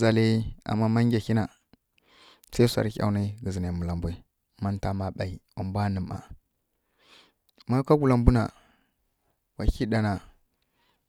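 No technical faults can be heard anywhere in the recording. The speech runs without any interruption or damage to the audio.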